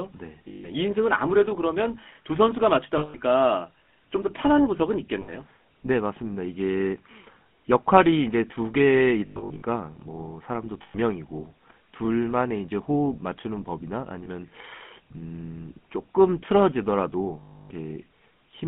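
The whole thing runs through a GSM full-rate codec, consistent with the old 13 kbps coder. The vocal tract is modelled and driven by sparse regular pulses, so speech comes out buzzy and gravelly, squeezed into a line band of about 150 Hz to 3.4 kHz.

Then there are lost GSM frames at 0.48–0.69, 2.98–3.16, 5.22–5.32, 9.26–9.62 (scattered, longest run around a tenth of a second), 10.82–10.96, 14.24 and 17.40–17.71 s. Each gap is patched by repeating the last good frame, giving a rough metallic ring.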